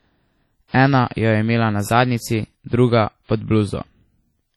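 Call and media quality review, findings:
Ringing, washy texture with hiss that breathes with the speech throughout. Heavy damage, likely WMA compression at a low bitrate near 32 kbps zeroing weak spectral lines.

Pre-echo, 0.68 to 0.74 s: short hiss leading an attack, onset smeared. Quantisation noise from the transform block spreads about 59 ms ahead of the transient.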